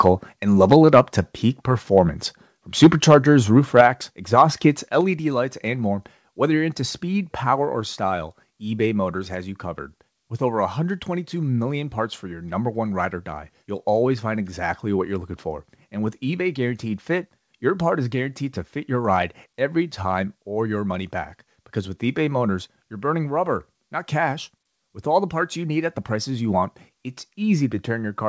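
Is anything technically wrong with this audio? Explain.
Yes. Microphone overload occurs at 0.06–0.1 s, 0.62–1.0 s (ending just before "to peak performance"), 2.82–3.15 s, 3.77–3.87 s and 4.38–4.42 s. Peaks are driven about 2 to 6 dB past the converter's ceiling and flattened, adding a harsh crackle. The likely cause is excessive microphone input gain.

Microphone volume stepped down at 0.73 s, 3.81 s and 5.01 s (just before "lights and more whether"). The level drops abruptly by about 2, 4 and 4 dB, likely because the call software cut the input gain after the clipped peaks.

The audio ends at 8 kHz, which fits a G.722 call path at 64 kbps.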